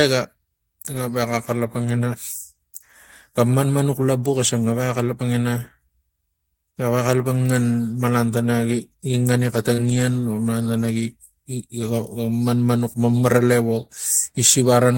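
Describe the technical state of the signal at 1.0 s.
At 1.0 s there is a lost packet rebuilt from error correction, 0.93 to 1.07 s. A low-bitrate copy fills the gap, so no silence, but the spectrogram shows rougher, noisier texture.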